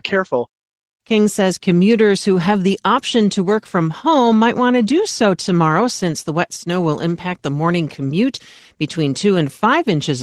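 Throughout the speech, Opus voice compression running at a low rate, consistent with roughly 16 kbps in hybrid mode, codes the excitation too coarsely to hold detail, leaving the voice plainly hoarse and slightly robotic.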